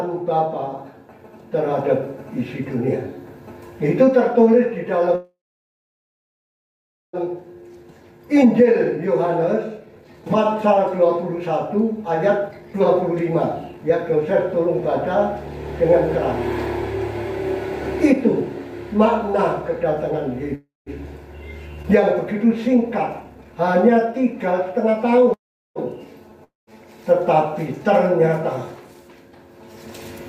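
Packets held up in transit likely emptied the jitter buffer three times, producing call audio freezes at 5.15–7.16 s, 20.55–20.89 s and 25.33–25.78 s. Each time the last sound is stretched into a fading buzz and then silence, about 1.8 s of it in the first. Playback then resumes where it stopped, so nothing is lost but the audio falls behind. To recover that delay, the receiver trimmed pitch-period-sized pieces, causing jitter buffer speed-up from 7.27 to 20.18 s at 108% speed (about a second removed) and from 22.33 to 25.27 s at 116% (about half a second), so the sound runs hurried at unchanged pitch. At 21.82 s audio was dropped while later audio was already waiting, and a skip ahead jumps over roughly 0.3 s, joining the two sides almost seamlessly. Finally, a long network dropout at 26.44–26.70 s, where packets likely never arrived, loses about 0.24 s: a brief fading buzz gives way to about 0.17 s of silence before the audio returns further on.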